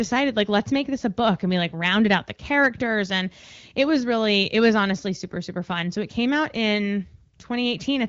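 From 0.15 to 0.58 s the speech shows hard clipping, driven about 2 dB past what the stage could pass, so the loudest peaks are sliced flat. It comes through as brief crackle on peaks, seen as squared-off waveform tops and faint vertical smears of harmonics reaching up the spectrogram toward the 7.5 kHz ceiling that the AMR wideband (HD Voice) codec imposes.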